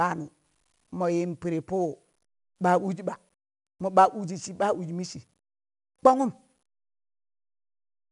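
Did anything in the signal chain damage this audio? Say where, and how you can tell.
Yes, at the codec stage: the speech carries 4-bit ADPCM compression damage from start to finish. A gritty hiss rides on every louder stretch and drops back as the level falls, which is quantisation error following the signal. Each sample is coded as a coarse 4-bit step from a predicted value, and the error tracks that adaptive step size. Nothing sounds above 10.7 kHz, which fits a low sample rate near 22 kHz and a rate of about 88 kbps.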